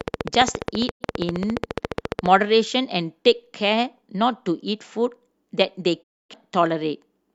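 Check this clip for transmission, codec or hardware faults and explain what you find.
Two kinds of fault are audible: a train of clicks in the opening seconds and two digital broadcast dropouts.

From 0.01 to 2.27 s, a regular ticking of roughly thirty clicks, about 15 per second, peaks well above the speech, likely from interference or a faulty connection.

At 0.90 to 1.05 s and 6.02 to 6.35 s, the sound fades to silence over 20 ms. This is a digital broadcast dropout: the receiver muted on losing frames, and 85 ms and 256 ms of audio are gone.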